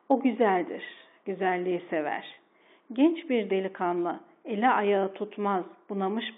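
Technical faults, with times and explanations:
2.34 to 2.37 s, packet loss with pitch repetition: 30 ms of audio went missing, which fits a single lost packet. The receiver bridged the gap by looping the last pitch period, so the sound briefly holds with a slight buzzy quality before resuming.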